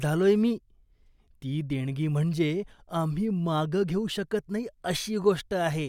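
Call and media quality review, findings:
No call or media quality faults found in this speech clip.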